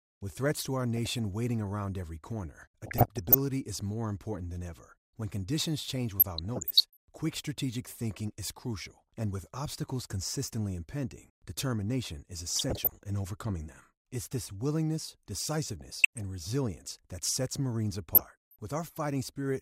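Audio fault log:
0.97–1.19 s, 2.86–3.38 s, 6.20–7.18 s, 12.54–13.10 s, 15.81–16.22 s, 18.15–18.56 s: DAB burbling. Weak reception lets bit errors into the MP2 data, so single sub-bands jump for a frame, giving short noise blips over the speech rather than the silent gaps of dropouts.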